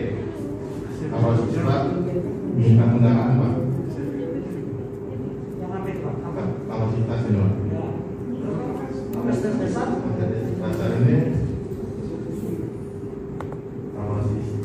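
No technical faults can be heard anywhere in this audio.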